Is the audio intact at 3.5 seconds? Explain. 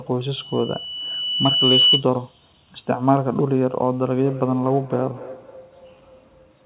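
Yes, at 3.5 seconds the speech is intact, with no dropout, glitch or distortion at that moment.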